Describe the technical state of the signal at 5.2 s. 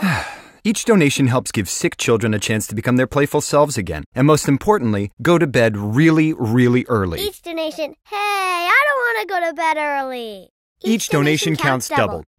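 At 5.2 s the signal is intact, with no audible dropout, distortion, or other technical fault at that point.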